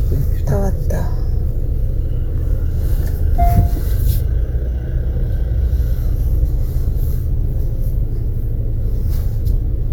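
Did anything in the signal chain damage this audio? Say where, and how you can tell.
No, nothing in the chain from capture through to playback has left an audible mark on these sounds.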